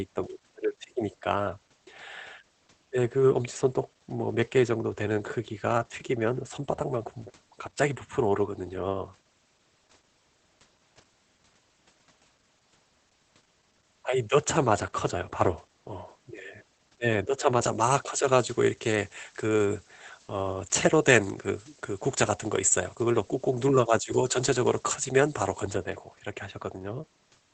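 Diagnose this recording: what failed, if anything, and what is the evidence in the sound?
Muffled, hoarse, faintly robotic speech through the whole clip, with nothing above about 8.4 kHz, is Opus voice compression at the codec stage. The SILK coder's wideband limit and coarse excitation coding fit a low bitrate of around 12 kbps in 20 ms frames.

From 17.62 to 25.62 s the speech turns thin, bright and sibilant. This is pre-emphasis left on at the processing or playback stage. A treble boost matching a 75 µs FM curve, about 13 dB at 10 kHz relative to 1 kHz, was never undone by its de-emphasis.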